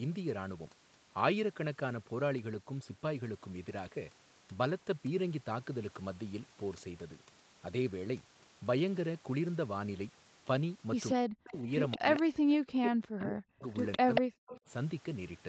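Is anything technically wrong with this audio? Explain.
Yes, there are two related faults in the last few seconds of the speech.

Echo leak appears at 11.09 to 11.13 s, 11.91 to 12.22 s and 13.92 to 14.59 s. The likely cause is a far end on a loudspeaker whose echo canceller let part of its microphone pickup through and sent it back. A copy of the voice trails the original by about 185 ms. The first scrap is faint, roughly 20 dB down, and the second is a little louder. By the third stretch the echo is about as loud as the speech itself.

Speech suppressed in double talk occurs at 11.15 to 12.06 s, 12.56 to 13.64 s and 13.98 to 14.68 s. Here both sides were talking at once, and the echo canceller likely could not tell the local talker from loudspeaker echo, so it turned everything down. The voice dips by as much as roughly 40 dB, with about half a second, then about a second, then about half a second of it affected. 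These dropouts sit alongside the echo, which like the rest of the audio carries nothing above 8 kHz.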